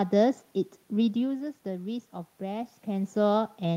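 No technical faults are present in this speech recording. Room noise sits underneath, and the level shifts around 1 s and again near 2.5 s come from the talker moving relative to the microphone.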